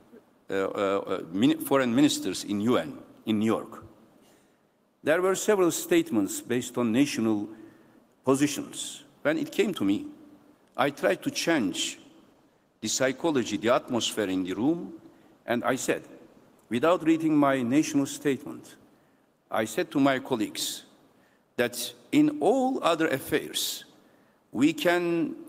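From 11.51 to 17.13 s the audio turns coarse and rough, a call bitrate drop that fits the encoder halving from 32 to 16 kbps before recovering.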